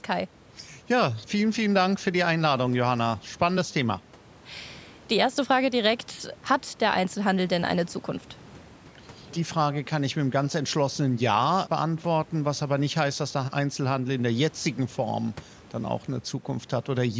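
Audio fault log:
No fault found in the speech.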